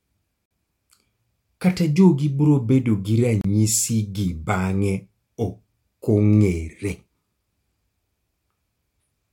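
A Bluetooth stall is the likely cause: packets held up on the wireless link let the headphone buffer run dry, so this speech clip drops to brief silence at 0.46 s for about 52 ms and again at 3.41 s for about 31 ms.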